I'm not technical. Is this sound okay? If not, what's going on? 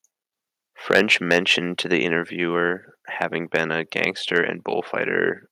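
No. There's microphone overload in the speech from 0.9 to 1.52 s, just after "interviewer having" at 3.55 to 3.6 s, and at 4.36 to 4.38 s. The loudest moments sound harsh and crackly, likely because the microphone input was set too high and the peaks got chopped off. Unlike background crackle, it appears only on the loudest parts.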